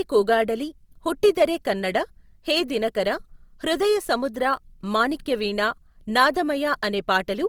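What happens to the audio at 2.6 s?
At 2.6 s the speech carries the same artefact heard across the whole clip, most likely Opus compression in its CELT music mode. Band energies stay intact, but detail within the bands is rebuilt by folding or noise fill, so voiced sounds come out rough, grainy and noisy rather than swirly. Bandwidth stays full, reaching about 20.3 kHz, and the plainly audible damage points to a low bitrate of around 24 kbps.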